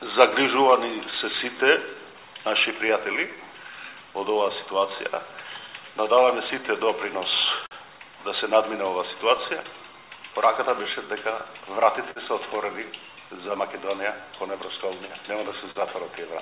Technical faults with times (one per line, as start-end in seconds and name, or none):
0.00-16.41 clock drift between sender and receiver
0.69-15.10 repeated timing corrections
1.11-3.17 scattered short gaps
7.66-12.19 scattered short gaps
15.71-15.78 short stall from a late packet